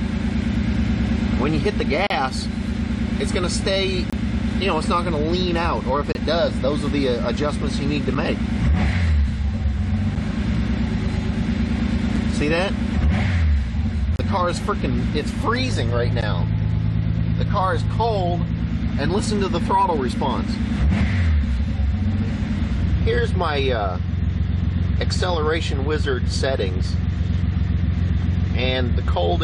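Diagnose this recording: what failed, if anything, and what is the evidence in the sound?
The audio drops out in short, hard-edged holes of silence at 2.07–2.10, 4.10–4.13, 6.12–6.15, 8.15, 10.15, 12.16, 14.16–14.19 and 16.21 s, lasting between about 5 and 34 ms and recurring every 2 s. This is a gap between stream segments, a fault in network streaming and playback. The time stamps of consecutive 2-second segments leave a small gap, which the player fills with silence. Nothing is removed; the timeline is only stretched.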